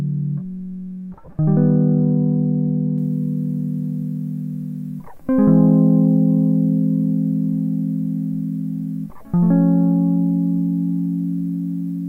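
At 1.26 to 1.28 s the music shows lost LE Audio frames: about 20 ms of data, consistent with two frames, never arrived. The LC3 decoder filled the gap by repeating the last spectrum with randomised phase, so tones briefly blur into a short noisy smear.

From 2.98 s to the end, pre-emphasis is left on. The treble boost matching a 75 µs FM curve was applied but never undone, lifting 10 kHz about 14 dB relative to 1 kHz. The music turns thin, bright and hissy.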